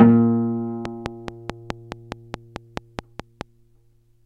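Likely interference or a faltering interface injects a train of clicks from 0.85 to 3.42 s: regular ticks, 4.7 per second, standing well above the sound.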